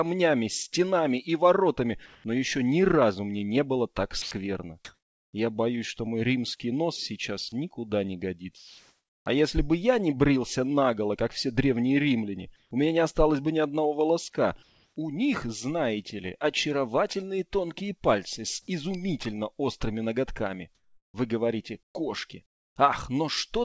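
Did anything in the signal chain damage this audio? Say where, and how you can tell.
Yes. Sound dropped by the voice detector at 2.06–2.24, 4.22–4.31 and 7.49–7.52 s: the sound gives way to noise, likely because the sender's detector mistook it for background.

Comfort noise in place of the background at 4.22–5.33, 8.57–9.26, 12.56–12.71, 14.63–14.96 and 20.75–21.95 s: smoother synthetic noise, about 1 to 2 dB quieter or 5 dB louder, likely fills discontinuous-transmission pauses.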